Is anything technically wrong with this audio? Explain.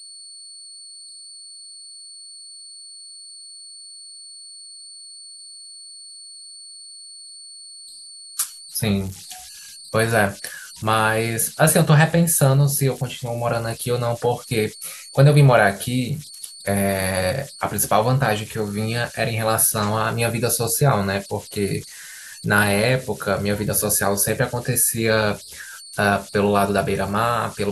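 Yes. Converter idle tones run through the whole clip. A whistle around 4 kHz sits about 20 dB below the speech, clearest in the pauses, and turns into a gritty texture under the quieter syllables. Without dither, the delta-sigma converter's modulator locks into repeating bit patterns whenever its input is small, and those cycles come out as a tone. Unlike mains hum, its pitch isn't a fixed low harmonic series: it sits high and follows the input's offset.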